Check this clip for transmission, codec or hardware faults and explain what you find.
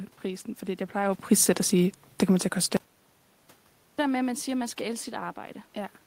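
One fault stands out, an audio dropout to silence. Between 2.77 and 3.99 s, after "kommer til at koste" and before "der med at man", the speech and room noise vanish into dead silence for 1.22 s. The input likely dropped while the recorder kept writing zeros.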